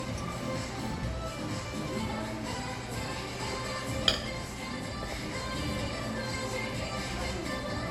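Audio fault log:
throughout, generation loss: the sounds have a swirling, hollow, smeared quality, with attacks that blur rather than snap, and nothing above 19.6 kHz. This likely comes from repeated lossy MP3 coding, around ten passes at a rate pointing to 96 kbit/s, each requantising on a shifted frame grid so errors pile up. A spectrogram shows a hard ceiling with ragged, flickering holes below it, and the waveform shows softened transients.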